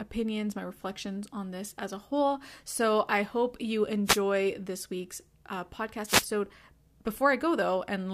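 Wireless microphone noise hits at 4.05–4.20 s, after "I hope you", and 6.05–6.26 s, after "this week's uh": FM fades raise receiver noise into a static swish, showing as broadband spectrogram smears.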